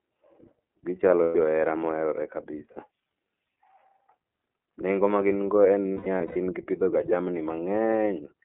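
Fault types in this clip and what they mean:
iLBC codec: The speech is confined to a telephone band of about 250 Hz to 3.4 kHz, with nothing above that, and has a plainly audible rough, slightly synthetic grain throughout. This fits iLBC in its 30 ms-frame, 13.33 kbps mode, where each frame's excitation is coded independently. Unlike a smoother narrowband codec such as G.711, the texture itself is a little rough and synthetic, not just bandlimited.
lost iLBC frames: At 1.23 s, a 120 ms gap before "johera moherore kabisa" is filled with a held, faintly buzzy vowel-like tone. From 5.94 to 6.37 s, between "magin go en" and "gipidhoga jamini", 240 ms of losses are scattered over 420 ms, the longest run around 100 ms. The decoder repeats the last pitch cycle with noise, and the speech snaps back immediately, unlike codecs whose errors linger afterward.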